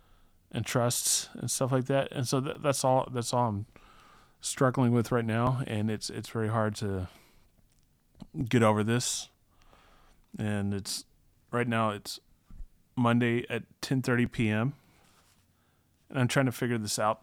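Clock drift buffer slips run from 2.55 s to 17.20 s as a regular click or pop, around seven in all, recurring every 2.93 s while the speech continues. The likely cause is two devices running on separate clocks that disagree by roughly a tenth of a percent, so the buffer between them gradually overfills or drains until a block of around 150 samples is dropped or repeated, producing each tick at that steady interval.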